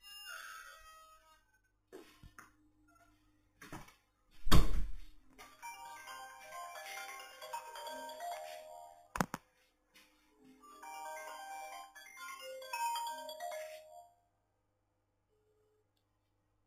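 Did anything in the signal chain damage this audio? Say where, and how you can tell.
Yes. Sample-rate conversion from 8 kHz to 48 kHz repeated samples without filtering, causing imaging from sample-and-hold upsampling: mirrored copies from 4 to 8 kHz, about 14 dB down, add metallic fizz throughout.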